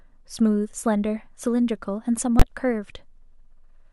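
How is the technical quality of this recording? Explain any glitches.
The recording has one serious glitch, an invalid-numbers-at-full-scale fault from 2.40 to 2.42 s. A calculation produced infinite or invalid values, which were forced to the largest positive or negative sample value for a 20 ms block. The speech is replaced by output sitting flat at one extreme value, far beyond the speech peaks, and because the block is so short it is heard as a single sharp, very loud bang.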